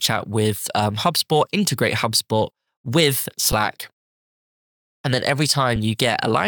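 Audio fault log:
3.52 s and 5.76 s, underrun with held sample: the output buffer briefly ran dry, about 7.35 ms and then 2.9 ms, the second lasting 128 samples. The converter just held its last value, so the speech flattens out and picks up where it stopped, with only a soft edge.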